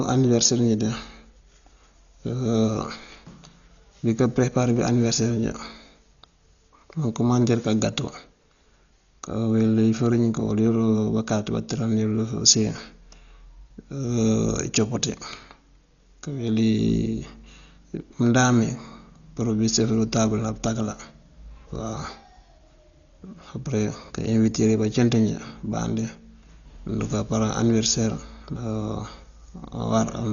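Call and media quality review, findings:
Dull, muffled speech throughout, nothing above 7 kHz, with a rough, fluttering noise wrapped around voiced tones; heavy codec damage. Likely Dolby Digital compression starved of bits, which fits a rate near 40 kbps. The encoder cut the band and left many frequency lines without mantissa data, so the decoder filled those gaps with dither noise.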